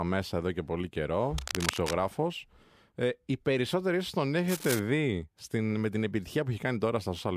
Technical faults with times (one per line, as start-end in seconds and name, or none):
1.38-1.97 cable scratch noise
4.48-4.80 cable scratch noise